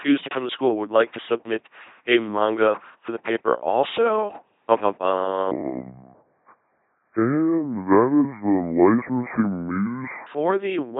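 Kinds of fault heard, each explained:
LPC-10 vocoder: throughout, the speech is a buzzy, mechanical robot voice, rebuilt at 2.4 kbit/s from a ten-pole filter fed by pulses or noise.
Section at the wrong speed: from 5.51 to 10.27 s, ending before "the week", the audio runs at 0.641 times speed, about seven semitones deeper and slower, likely from playback against the wrong clock.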